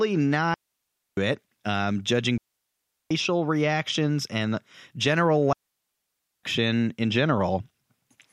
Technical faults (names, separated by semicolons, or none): digital wireless dropout